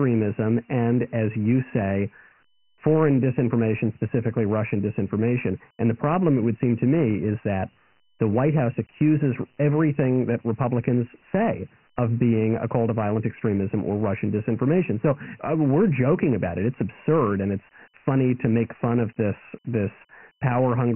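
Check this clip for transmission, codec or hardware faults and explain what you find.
One codec fault runs throughout the speech: Dialogic VOX ADPCM. Nothing is heard above 3 kHz, which fits 4-bit samples at 6,000 per second. Heavy gritty hiss trails the speech.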